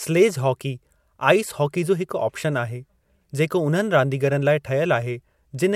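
No technical faults are audible anywhere in the recording.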